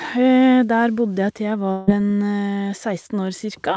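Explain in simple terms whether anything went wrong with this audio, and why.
Yes. From about 1.72 to 1.89 s, the speech breaks off and is replaced by a short, fading buzz that carries on the last sound before the talking resumes with a piece skipped. This is most likely a long network dropout, where the call's audio stopped arriving and the receiver filled the gap.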